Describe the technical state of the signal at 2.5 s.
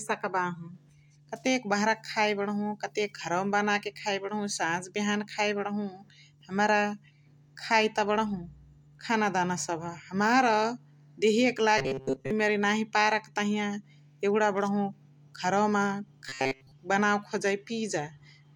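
At 2.5 s the signal is intact, with no dropout, clipping, distortion or other fault audible at that point in the speech.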